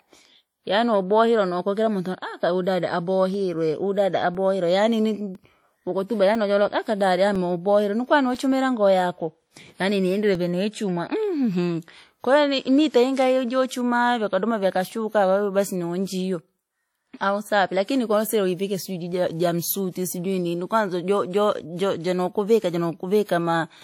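From start to finish the speech has a ringing, washy quality. A hiss rises and falls with the signal, and nothing is heard above 18.5 kHz. The damage is plainly audible. The likely cause is WMA compression at a low bitrate, around 48 kbps.

From 3.34 to 10.35 s, after "mountu aka uhu dada" and until "vene ya chumwa", regular ticks sound once per second, about seven in all. These are periodic USB or driver dropouts. Each time, roughly 2 ms of audio is replaced by silence.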